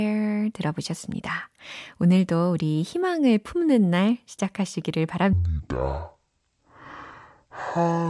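At 5.33 s, just after "희망을 품는 날 시작하시기를", a wrong sample rate fault takes over and lasts to the end at 8.10 s. The samples are replayed at half speed without conversion, which fits 48 kHz audio played at 24 kHz, so the speech becomes slow, heavy and a full octave lower (−12 semitones). On a spectrogram, harmonics and formants drop to half their frequency and stretch out in time. The waveform's cycles widen to twice their length.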